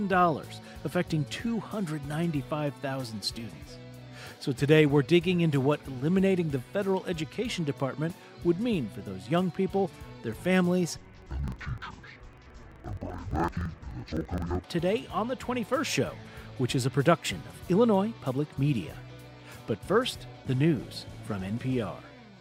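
From 10.97 to 14.66 s the audio drops an octave and turns doubled and choppy, a sign of interleaved audio read as planar: each 42.67 ms block, which fits a 2048-sample block, has its halves played as separate channels at half speed, chopping at 23.4 Hz.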